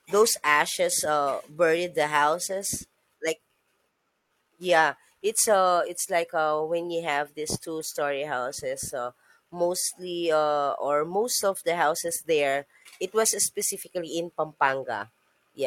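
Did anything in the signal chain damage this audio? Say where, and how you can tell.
No, nothing in this speech recording stood out as damaged on listening.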